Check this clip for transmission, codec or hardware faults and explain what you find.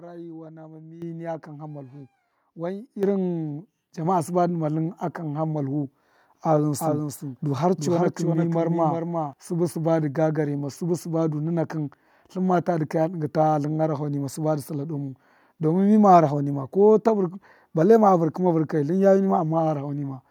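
Two problems stand out. At 1.02 s, 3.03 s and 4.05 s there's a microphone volume step-up, with the call software bumping the input gain by about 10, 7 and then 4 dB, so voice and background jump together. The first lands just before "niya kan ha malvu", the second just after "kan ha malvu wan". From 6.79 to 9.33 s there's a doubled audio track: a full-band echo around 400 ms behind, a few dB quieter, with no room decay, switching on and off abruptly. It's likely a second, slower capture path being mixed in.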